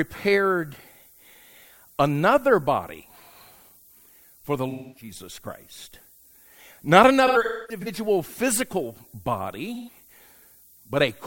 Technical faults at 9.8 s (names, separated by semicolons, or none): low bit depth with noise shaping; AAC frame loss with concealment